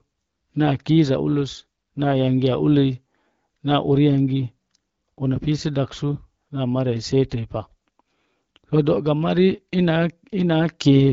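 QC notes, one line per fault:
No faults found; the speech runs over the AMR wideband (HD Voice) codec at 12.65 kbit/s, which leaves only light coding traces.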